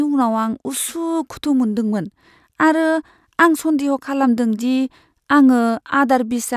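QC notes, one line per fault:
Nothing stood out on listening to this speech recording.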